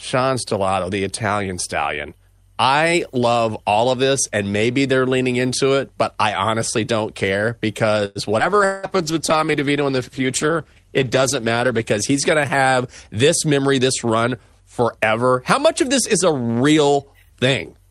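Right after "I honestly don't care", at 8.05 to 8.18 s, there's a call audio freeze. The sound hangs as a fading buzz for about a tenth of a second and then carries on where it stopped, so nothing's lost but it now runs roughly 100 ms later, likely because packets got held up and the jitter buffer ran dry. Straight after, from 8.39 to 8.58 s, a skip ahead jumps the speech forward, dropping somewhere around 70 ms and pulling the delay back by about 50 ms, with the two sides butted together almost seamlessly. Overlapping that, a call bitrate drop kicks in at 8.40 s and lasts until 13.43 s, with the encoder going from 64 down to 15 kbps and sitting at the bottom for about 3.2 s. So the speech turns coarse, watery and dull through that stretch as the top end gets cut off. From 8.65 to 8.86 s there's a long network dropout. The last sound is stretched into a decaying buzz for about 180 ms, and when speech resumes that same 180 ms never comes back, most likely because nothing arrived for that whole window. 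Then from 8.97 to 9.46 s a jitter buffer slow-down plays the speech at about 92% speed with the pitch unchanged, padding in roughly 50 ms by repeating pitch periods, so it sounds a bit drawn out. Finally, 12.88 to 14.55 s has a jitter buffer speed-up running at about 106%, trimming around a tenth of a second to cut the backlog, and the delivery sounds slightly hurried.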